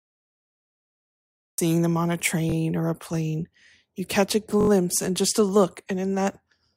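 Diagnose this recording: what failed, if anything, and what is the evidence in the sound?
Capture or stream start: the recording began late, so the file holds digital silence from 0 to 1.58 s and the speech then switches on mid-sound just before "them on a". This is a cut-off start. There is no natural attack or fade-in, and the first sound arrives abruptly, already in progress, because whatever preceded it in the speech was never captured.

Driver or buffer stage: playback or capture ran dry twice and the device re-sent its last block instead of new audio, a repeated buffer. From 2.50 to 2.54 s, between "them on a" and "or a plane", one roughly 21 ms chunk plays two extra times. From 4.61 to 4.69 s, between "catch a" and "and just a look", it repeats four extra times. Each repeat has a hard join, heard as a brief stutter. The 21 ms period fits a 1024-sample buffer. Essentially no audio is lost; the repeats are inserted.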